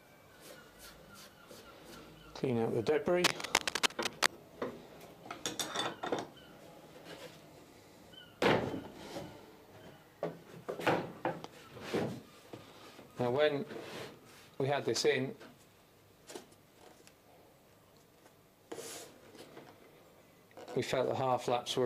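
From 3.24 to 4.27 s, cable scratch noise rasps over the audio, somewhat louder than the sound itself. Likely a worn cable or connector being moved, its contact flickering. Unlike isolated clicks or dropouts, this is a dense, uneven rustle lasting about a second.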